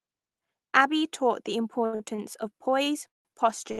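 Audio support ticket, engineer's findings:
Short stall from a late packet, five events: 1.85–1.95 s (about 76 ms stretched), 1.95–2.02 s (46 ms), 2.16–2.20 s (24 ms), 2.84–2.88 s (17 ms), 3.72–3.80 s (64 ms). Symptom: speech sound held too long, faint buzz or dip, then it resumes where it stopped. Component: jitter buffer underrun, with the decoder extending the last frame. Versus a freeze: no silence, and nothing is lost.

Call audio freeze, 3.08–3.30 s. Symptom: the last sound continues briefly as a fading buzz, then about 170 ms of silence before speech restarts from the same point, roughly 0.17 s later. Likely cause: packets held up in transit, draining the jitter buffer. Versus a short stall: the fill decays to silence rather than holding steady. Heard through the Opus call path, top end cut near 12 kHz.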